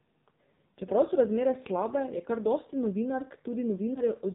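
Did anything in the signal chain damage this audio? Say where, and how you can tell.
Yes. At the codec stage the whole clip passed through the AMR narrowband mobile codec. Nothing above 4 kHz survives, and the speech is buzzy and synthetic, which points to a low AMR mode near 6 kbps. A plain low-pass filter would lose the top without adding that buzz.

At the network stage, lost AMR speech frames cause a brief dip or warble from 3.94 to 4.02 s, consistent with a single dropped 20 ms frame. The decoder reused its last pitch and vocal-tract settings at lower gain, so the speech smears rather than hitting a hard silence or click.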